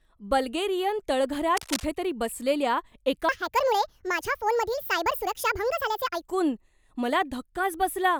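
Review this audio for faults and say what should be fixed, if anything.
From 1.56 to 1.85 s there is cable scratch noise: a ragged, rustling burst sitting about 10 dB below the speech. It is likely a worn cable or connector being moved, its contact resistance jumping about and injecting uneven noise. On a spectrogram it shows as a dense, broadband smear with irregular vertical streaks. The waveform shows jagged, spiky fuzz riding on the signal for those 0.29 s. Replacing or securing the cable and connectors before recording would prevent it.

From 3.29 to 6.23 s there is a section at the wrong speed. It runs 1.59 times too fast, so the speech turns hurried and shifts up by roughly seven semitones, then drops back to normal. The likely cause is that this stretch was played or rendered against the wrong clock. On a spectrogram the harmonics and formants jump upward at the start and back down at the end. 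The waveform looks compressed in time, with syllables packed closer together. Checking that every segment's sample rate matches the project rate during editing and export would prevent it.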